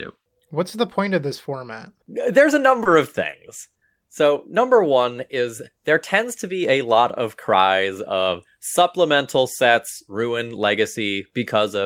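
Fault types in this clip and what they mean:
Short concealed packet loss: Small pieces of the speech arrived too late for the decoder to use. The receiver covered each gap by carrying the preceding sound forward, then blended back into the real audio. It happens four times, at 2.83 to 2.87 s, 3.29 to 3.35 s, 3.73 to 3.77 s and 3.79 to 3.83 s. Three gaps last 20 ms, and one lasts 40 ms. Each comes through as a brief smear or wobble.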